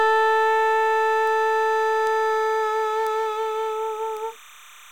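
A steady chirping warble sits behind the sound from start to finish, roughly 25 dB below it, flickering between pitches near 1 kHz and 2 kHz. This is timecode bleed: linear timecode from a neighbouring track or cable has leaked into the audio. The code is a square wave whose pitch switches as each bit is written, and its rhythm fits 30-frame-per-second timecode.

Four sharp, isolated ticks cut through at 1.27 s, 2.07 s, 3.07 s and 4.17 s. Each is spread across the whole spectrum and unrelated to the material around it. They are bit error spikes. A single flipped bit in memory or on a digital link makes a sample value jump by a power of two and then return. The ticks at 1.27 s, 2.07 s and 4.17 s peak at about −18 dBFS, and the one at 3.07 s is louder at about −12 dBFS. The one at 2.07 s sounds slightly fuller, which fits a short run of corrupted samples rather than just one.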